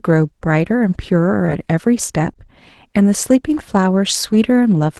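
Around 1.45 to 1.50 s there's a short concealed packet loss: about 20 ms never arrived, so the receiver stretched the previous sound to cover it, giving a brief smear. At 1.48 to 1.50 s, one lost packet was rebuilt from error correction, so the 20 ms sounds rougher and noisier. Another concealed loss lands at 2.34 to 2.37 s, a quick wobble where the decoder guessed and blended back, all over the Opus call path at 24 kbps.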